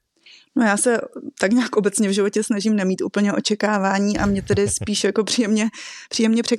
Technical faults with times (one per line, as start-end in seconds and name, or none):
4.97-5.01 corrupt frame concealed